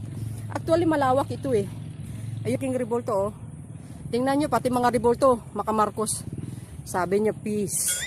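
At 2.55 to 2.57 s there is a skip ahead: the receiver discarded a stretch of audio while later material was already queued, so playback leaps forward with no filler. Roughly 0.7 s of sound is simply gone, and the two sides butt together abruptly.

From 4.5 to 5.26 s a jitter buffer speed-up occurs: the buffer was holding more audio than its target, so it trimmed short pitch-period pieces repeatedly, about a tenth of a second in all. The sound runs at about 110% speed with unchanged pitch and feels rushed.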